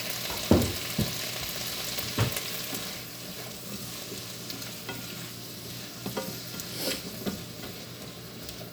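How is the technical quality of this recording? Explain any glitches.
The sounds here come through with no audible glitches or technical faults in the signal.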